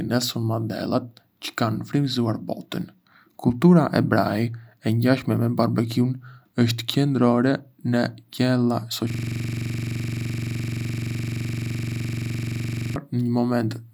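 A speech clip that, from 9.10 s to 12.96 s, collapses into a hard, rattling buzz: a 42.67 ms fragment repeats exactly, some ninety times, at 23.4 Hz. This is a system hang loop. The machine stalled while the audio hardware kept replaying one ring buffer, consistent with a 2048-sample buffer.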